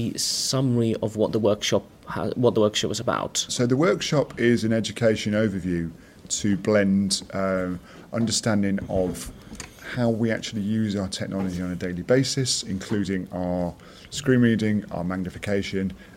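No technical faults can be heard anywhere in this clip.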